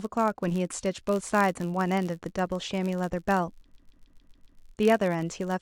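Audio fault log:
throughout: filter restarted on every block. The filter state is cleared at each block boundary, so every block opens with a small transient. This produces a steady buzz at 86.1 Hz that rises and falls with the speech level, which fits a 512-sample buffer.
3.75 to 4.59 s: repeated frames. A stretch of about 139 ms, consistent with a short run of compressed frames, plays six extra times in a row. This is heard as a rhythmic stutter. It adds about 0.84 s to the clip.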